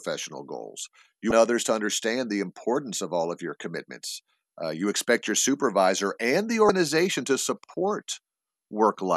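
Speech with two short bursts of damaged data in a compressed stream, at 1.28 to 1.32 s just before "others to understand the" and at 6.66 to 6.70 s right after "your supervisor and the". Corrupted frames there are misread by the decoder, which loses sync until the next valid frame header. Each burst is heard as a brief chirp, squawk, click or short hole, and on a spectrogram or waveform it appears as a narrow disturbance about 34 ms wide.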